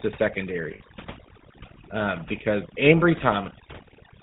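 A speech recording carrying three faults. The whole clip has passed through the GSM full-rate codec, and the damage is plainly audible. The voice has a buzzy, gravelly grain because the codec rebuilds each stretch from a vocal-tract filter driven by a sparse train of regular pulses. Nothing survives above 4 kHz, which fits the 13 kbps telephone codec. On a spectrogram the energy stops at a hard ceiling at 4 kHz, and the harmonics look smeared and coarse rather than cleanly striped. Overdone noise removal sits on top of this throughout. The background has been pushed down and broken up into small twinkling specks, because individual frequency bands close to the estimated noise floor have been cut hard or removed entirely, taking the quieter parts of the voice with them. A spectrogram shows this as a speckled, moth-eaten texture: isolated bright dots scattered across dark gaps, with ragged holes in the weaker parts of the speech. 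From 0.74 to 0.81 s there are lost GSM frames. About 60 ms of signal, consistent with three 20 ms frames, is replaced by the previous frame's parameters repeated, which gives a brief rough, metallic ring. In the waveform this appears as a short, repetitive stretch. On the spectrogram it shows as frozen horizontal bands where the formants stop moving.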